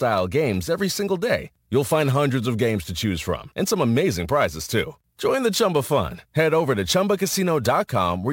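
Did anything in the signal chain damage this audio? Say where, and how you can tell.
Yes, at the converter: sample clock jitter runs through the whole speech clip. A fine hiss and roughness rides on the loud, bright passages and disappears in the pauses, because the timing error of a few microseconds turns the waveform's slope into noise, here around 30 dB below the signal. On a spectrogram, a diffuse haze fills the upper bands only where the speech is strong, and clean gaps show between phrases. A waveform zoom shows the fuzz sitting on the steep edges.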